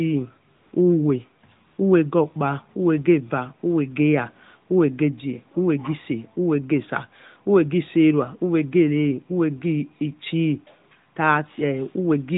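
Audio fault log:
0.56–0.72 s and 1.68–1.78 s, AMR comfort noise: the transmitting side judged these gaps silent and stopped sending speech frames for 160 ms and then 100 ms. The receiver filled each gap with synthetic noise built from a coarse level and spectral estimate, so the real background drops out and a smooth, steady hiss switches in and back out. The surrounding narrowband AMR audio shows light coding, consistent with the 12.2 kbps mode.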